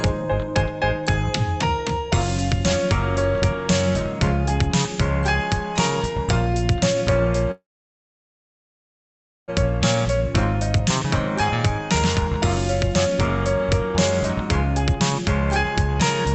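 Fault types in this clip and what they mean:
call audio freeze: at 7.51 s the sound trails off into about 1.8 s of silence, then resumes intact at 9.50 s; likely delayed packets emptying the jitter buffer.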